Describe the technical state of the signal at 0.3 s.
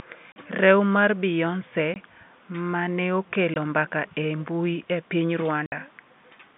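Packet loss filled with silence from 0.32 to 0.36 s: a 40 ms hole, consistent with two 20 ms packets dropped, replaced by digital silence with hard edges.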